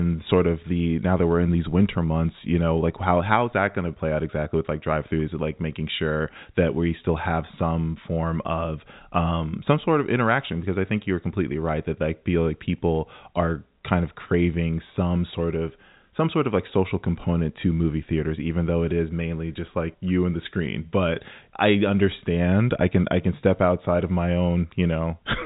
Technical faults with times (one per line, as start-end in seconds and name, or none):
none